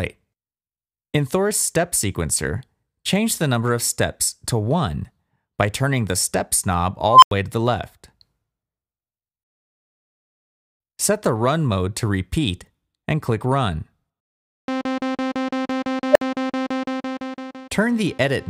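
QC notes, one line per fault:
7.06–7.31 s and 16.12–16.21 s, unstable filter: a tone near 1 kHz, then near 500 Hz, swells over 163 ms and 37 ms, then cuts to silence for 90 ms and 60 ms. Runaway recursive-filter feedback overflows, muting output until reset.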